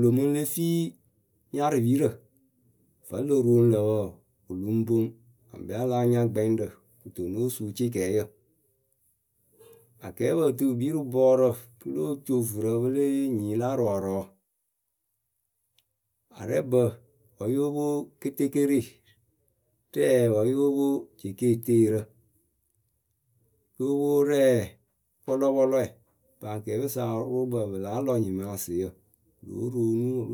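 Nothing in this speech recording stands out as a technical fault at any point, so there's nothing to flag here.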